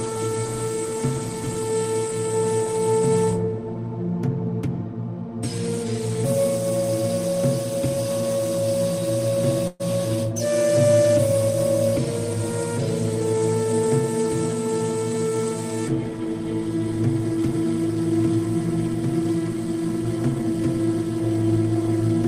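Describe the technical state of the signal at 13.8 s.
At 13.8 s the sound runs hurried at unchanged pitch, about 6% fast from 13.20 to 13.89 s: a jitter buffer speed-up, cutting around 50 ms of pitch-period slices to drain excess delay.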